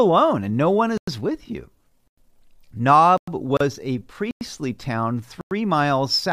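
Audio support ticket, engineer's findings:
Gap between chunks: five silences of 100 ms, at 0.98, 2.08, 3.18, 4.31 and 5.41 s. Each follows 1.0 s of speech, so the holes recur on a fixed 1.1 s cycle. Probable component: chunked delivery or a player starting each chunk late. Nothing is lost; the speech is only held back at each join. Distinguished from the encoder join by the strict 1.1 s rhythm and the uniform 100 ms length.

Gap at a join of encoded pieces: a single shorter dropout, about 35 ms, at 3.57 to 3.60 s, consistent with segments encoded separately every 4.0 s and joined untrimmed. Probable component: the concatenation step keeping the encoder's start-up delay and last-frame padding. Speech resumes exactly where it stopped. Unlike the chunk gaps, the edges are softened by the codec, the length is irregular rather than a round 100 ms, and it falls off the 1.1 s grid, close to the 3.18 s gap.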